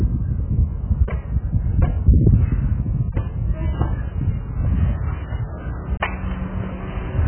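A recording of everyday sound that is dull and muffled from start to finish, with nothing above about 3.1 kHz, and a smeared, warbling, fizzy texture on any sustained or noisy parts. This is heavy AAC compression damage, likely from AAC-LC coding at a very low bitrate, consistent with around 8 kbps. At that rate the encoder lowers its cut-off and quantises the remaining frequency bands so coarsely that detail breaks up into swirling artefacts.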